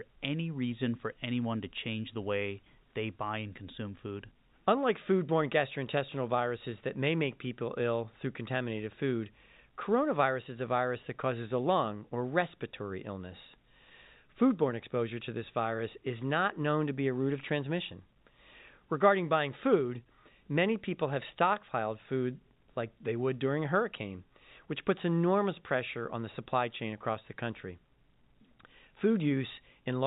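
Speech over G.711 telephone coding, with the band stopping at 4 kHz and only faint level-tracking quantisation noise, consistent with a 64 kbps A-law path, and no faults are present.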